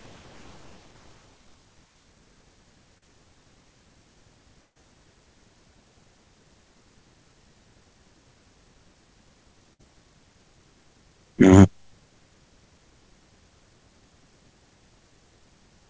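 Around 2.98 to 3.04 s there's a short concealed packet loss. Roughly 40 ms of audio never arrived in time, so the receiver papered over the hole by carrying the preceding sound forward for about 37 ms and then crossfading back into the real signal. What you hear is a quick smear or wobble rather than a clean dropout.

The bigger problems are two bursts of packet loss. The first runs from about 4.64 to 4.77 s, with roughly 120 ms missing. The decoder stretched the last sound out over about 118 ms while turning it down, and around 80 ms of that ends up silent, so you get a short held buzz or hiss that dies into a gap before the audio picks up further along. The second, from about 9.73 to 9.81 s, is smaller. About 60 ms is lost and 57 ms is concealed, heard as a brief frozen, fading stretch before the audio resumes further on. This all rides on a call path whose tone, with nothing above 8 kHz, points to G.722 at its usual 64 kbps.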